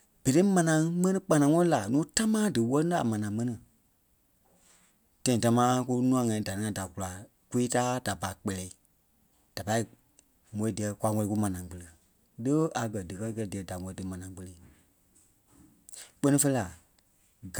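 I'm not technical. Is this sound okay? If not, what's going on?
Yes, this recording sounds okay, and there's nothing wrong with it that a listener would notice. The speech comes across steadily the whole way, with no interruptions or odd sounds to point out.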